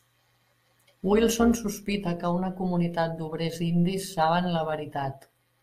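From start to end the speech carries a metallic buzz, its level pulsing by about 6 dB at around 150 Hz. This is overlap-add ripple: the signal was rebuilt from windowed frames whose overlaps don't sum to constant gain, so loudness dips once per frame.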